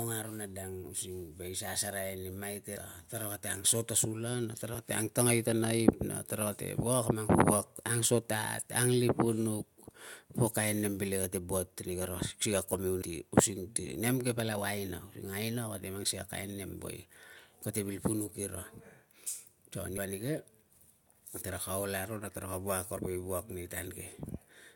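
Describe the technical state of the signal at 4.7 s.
At 4.74 s there is a brief burst of damaged data in the compressed stream: corrupted bytes make the decoder misread the frame and hunt for the next valid header, producing a short chirp or blip. A spectrogram shows a thin broadband vertical streak; the waveform shows an abrupt discontinuity.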